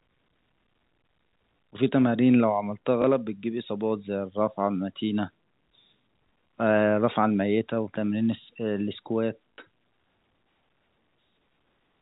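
At 3.02 to 3.04 s and 9.55 to 9.58 s, packet loss with last packet repeated fills gaps of 20 ms and 40 ms, consistent with one and two 20 ms packets. The longer one gives a brief robotic buzz near 50 Hz.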